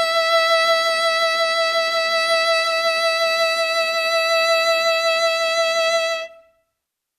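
No technical faults can be heard in this music.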